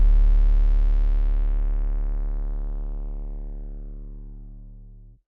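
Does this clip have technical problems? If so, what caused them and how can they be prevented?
No, this clip has no technical problems, so there is nothing that needs preventing.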